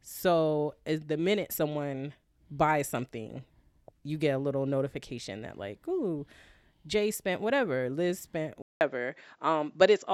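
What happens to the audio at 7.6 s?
Nothing goes wrong at 7.6 s; the speech carries on intact through that moment, with no dropout, click or distortion to be heard.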